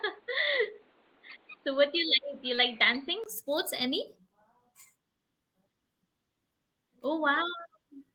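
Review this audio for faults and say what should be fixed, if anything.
Input switched to a poorer device, 0 to 3.26 s: the sound is dull, with nothing above 4.5 kHz and a noise floor about 35 dB down. After a 20 ms gap before "sports any", full bandwidth returns at a similar level, likely because the input moved to the proper microphone. Lock the capture device before recording, and disable headset call profiles so the system cannot fall back to a narrowband input.

Short concealed packet loss, 2.55 to 2.59 s: about 20 ms of audio never arrived, and the receiver extended the preceding sound to fill the hole, leaving a brief smear before blending back. Use a larger jitter buffer and forward error correction on the link so late or lost packets are recovered rather than synthesised.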